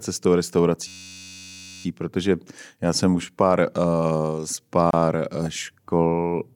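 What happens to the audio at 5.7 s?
At 5.7 s the speech carries on without any audible fault: no dropout, click, distortion or other break can be heard at that point.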